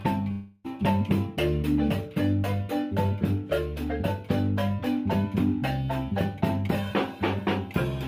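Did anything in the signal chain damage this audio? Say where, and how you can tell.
Yes, there's a long network dropout from 0.31 to 0.66 s: the last sound is stretched into a fading buzz or hiss, then about 320 ms is skipped, likely lost packets.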